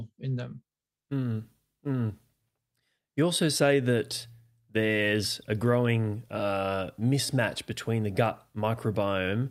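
Nothing stood out as a technical fault on listening to this speech recording.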